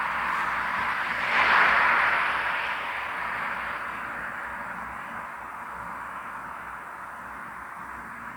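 No technical faults can be heard at any point in the recording.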